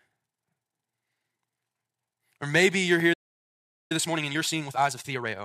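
At 3.13 s, just after "maybe you're here", the speech cuts out in mid-flow. This is a playback stall. The output falls silent for 0.77 s and picks up again at 3.92 s. The likely cause is the player running short of data or its thread being blocked. Output simply stopped until it could continue.

From 3.92 s to 5.34 s comes time-compressed catch-up. The player clears the backlog built up during the gap. It does this by removing small slices of audio and cross-fading across the joins. The speech runs at 1.5 times normal speed, yet its pitch stays put. It sounds rushed.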